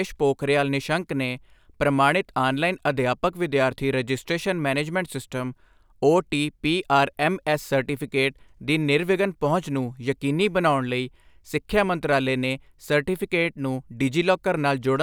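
Speech recording with no audible technical faults anywhere.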